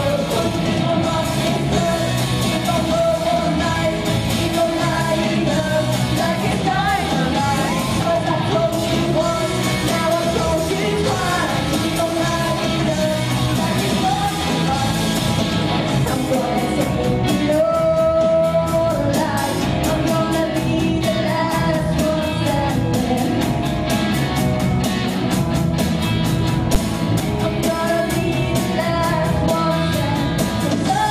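At about 26.75 s there's a single hard bang, and that's invalid numbers at full scale. Somewhere in the processing a calculation blew up into infinite or undefined values, and those got clamped to the maximum sample value, so the output jumped straight to full scale for one block of roughly 10.67 ms, which fits a 512-sample buffer. With a block that short you don't hear a gap between two pops, just one sharp, very loud crack.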